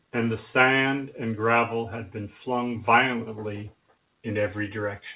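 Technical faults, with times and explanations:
No technical faults can be heard anywhere in this speech.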